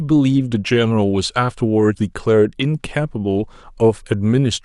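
At 1.97 to 2.01 s and again at 3.63 s, compressed frames are skipped: a few 20 ms frames never play, so the speech jumps ahead by roughly 70 ms. Unlike a dropout, there is no silent gap; the speech simply jumps.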